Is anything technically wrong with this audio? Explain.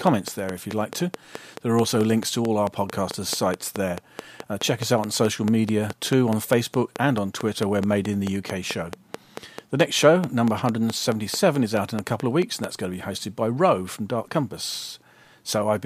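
Yes. From 0.07 to 12.65 s, ending just before "that's going to be", a regular train of clicks ticks at 4.6 per second, about fifty pulses, well above the speech and audible in pauses, likely from equipment interference.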